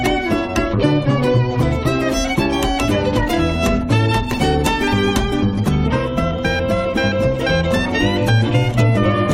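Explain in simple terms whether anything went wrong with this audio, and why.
Nothing went wrong with this audio, because no faults can be heard anywhere in it.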